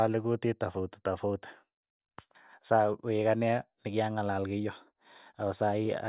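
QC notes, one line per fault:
No faults found in this clip.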